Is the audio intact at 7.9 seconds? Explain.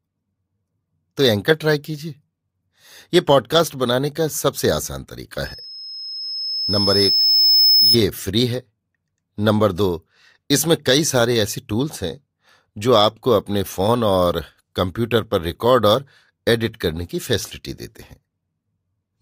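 No. At 7.9 seconds you're right at the tail of a loudspeaker feedback squeal that runs from 5.44 to 7.98 s. The mic is picking up its own speaker, and a 5.2 kHz tone rides the loop, swelling over around two seconds until it sits a few dB above the speech.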